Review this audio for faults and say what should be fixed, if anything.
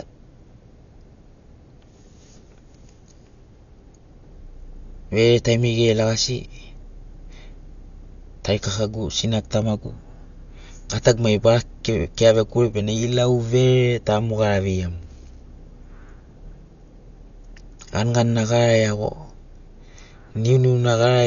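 Throughout, the speech stops at 6.9 kHz and carries rough, fluttering noise, likely Dolby Digital compression near 48 kbps filling bit-starved lines with dither. Encode at a higher bitrate to prevent it.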